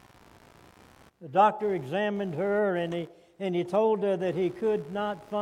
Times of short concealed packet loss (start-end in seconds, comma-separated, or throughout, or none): none